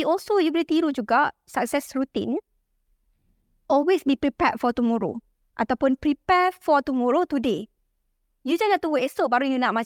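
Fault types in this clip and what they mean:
Nothing stood out on listening to this speech recording.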